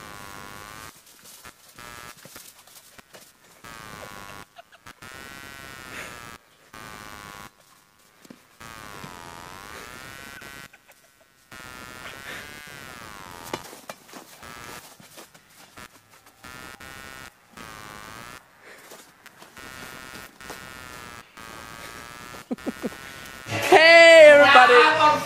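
Throughout the sound, computer activity noise adds a chirping buzz pulsing about a hundred times a second, around 30 dB down, shifting with processor load, unlike steady mains hum.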